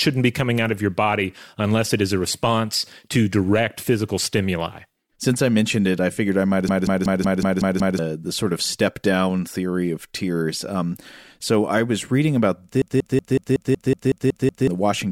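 At 6.69 s the system froze while the audio hardware kept replaying its last buffer: a system hang loop. One piece of speech about 186 ms long, which fits an 8192-sample buffer, repeats exactly seven times until 7.99 s, giving a machine-gun stutter at about 5.4 Hz. The same fault returns from 12.82 to 14.68 s with ten repeats. Roughly one and a half seconds, then about two seconds, of speech are lost.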